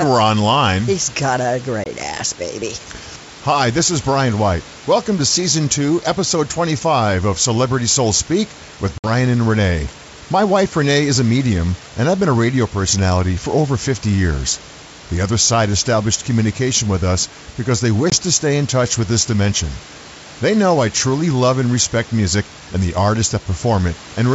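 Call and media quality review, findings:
Packet loss on the ADPCM call, three dropouts. 1.84–1.87 s, between "got a" and "ass baby": hard silent gap, about one 20 ms packet. 8.98–9.10 s: longer hole, roughly three packets. 18.10–18.17 s, between "with us because they" and "to stay in touch": one packet. Silence fills each gap. The decoder's predictor and step size then mismatch the sender's. Speech resumes slightly distorted, then settles. Hiss and background noise drop out in the gaps.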